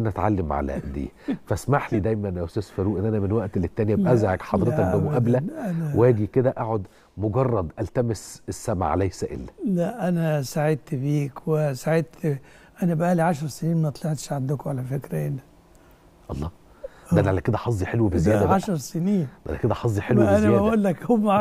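Nothing in this audio stood out as a technical problem on listening.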